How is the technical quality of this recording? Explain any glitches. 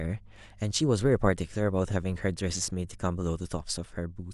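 Mains hum marks the recording from the start. From 0.0 to 3.02 s, a ground loop or nearby transformer leaks the 50 Hz power line into the signal. It sits as a steady low drone with some low harmonics, roughly 30 dB beneath the speech, then stops.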